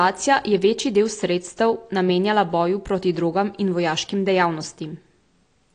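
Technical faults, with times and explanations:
Throughout, AAC compression: the speech sounds dull and plainly smeared, with nothing above 9.9 kHz and a watery, warbling texture on sustained sounds and sibilants. This is likely low-bitrate AAC-LC, consistent with roughly 32 kbps. The encoder splits each frame into frequency lines and quantises them coarsely against a hearing model. It drops the top band entirely and thins or patches weaker bands, so detail that changes from frame to frame flickers instead of holding steady.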